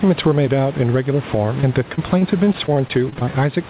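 Throughout the speech, the level rides up and down by around 10 dB, most likely from gain set far too high and a fast limiter clamping it, so loud and soft parts end up closer in level and the sound is squashed.

From 1.61 to 3.33 s, repeated packet loss leaves about a dozen short holes, none longer than about 27 ms, covering roughly 13% of that stretch. Each hole is patched by stretching the preceding sound rather than left silent, so the speech turns choppy instead of simply cutting out.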